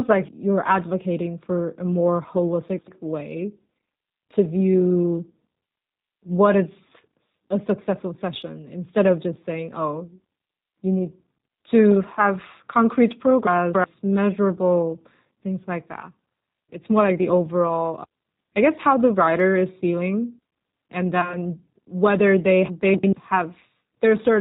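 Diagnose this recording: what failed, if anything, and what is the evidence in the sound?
G.729 codec, throughout the whole recording, at the codec stage. The speech has the rough, slightly synthetic texture of an 8 kbit/s G.729A path. Nothing above 4 kHz survives, so sibilants and consonant detail are dulled. The damage is plainly audible. The decoder rebuilds each 10 ms frame from a vocal tract filter, a pitch predictor and a handful of pulses, rather than sending the waveform itself.

Chunks out of order, at 2.69–2.88 s, 13.47–13.84 s and 22.94–23.13 s, at the driver or buffer stage. Each is a jumbled moment: the second sits between "need to have concrete" and "measurable things like that", and the third follows "whether they". A block about 93 ms long was written one, three and one chunks late respectively. Nothing is missing, but the order is wrong and there are hard joins.

VoIP packet loss concealed by the speech codec, at 21.21–21.38 s, at the network stage. 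Between "writer is feeling and" and "whether they", about 20 ms of audio, which points to a single lost packet, was replaced by the decoder's extrapolation from its last pitch and filter. That fill sounds like a brief buzzy or noisy, fading stretch. Because each frame builds on the previous one, the voice stays weakened for tens of milliseconds or more after the gap.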